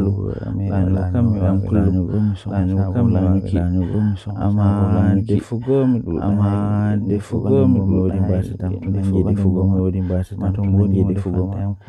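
Throughout the speech, a doubled audio track runs: a second full-band copy trails about two seconds behind at roughly equal loudness. Unlike an echo or reverb, it has no decay or room colour, so it likely comes from a slower duplicate capture path.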